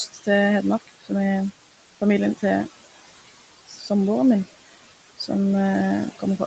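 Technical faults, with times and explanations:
Throughout: noise suppressor artifacts. The suppressor pulls steady room noise down by about 16 dB frame by frame, so the noise sinks between the words and rises under them.
0.07 to 0.27 s, 0.8 to 1.11 s, 3.67 to 3.89 s: speech cut by the noise suppressor. Quiet speech was mistaken for noise and dipped by up to about 17 dB, leaving sounds faint or swallowed.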